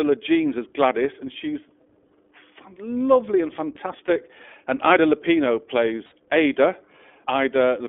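Speech passes through the iLBC codec, likely in its 15.2 kbps mode, leaving a narrow 250 Hz to 3.4 kHz band and plainly rough, synthetic tone. Lost iLBC frames at 2.08 s, 4.06–4.10 s and 6.06–6.14 s are concealed with briefly held, buzzy vowel-like sound, the last spanning about 60 ms.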